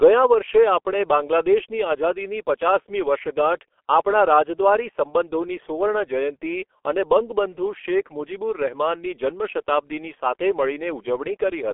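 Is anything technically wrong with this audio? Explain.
Yes. Throughout the speech, the audio has passed through a G.723.1 codec. It models the voice in coarse 30 ms frames at a low rate, consistent with about 6.3 kbit/s, and keeps only a telephone band of 300 Hz to 3.4 kHz, with nothing above 3.5 kHz. The result is heavily muffled, hoarse speech with smeared consonants.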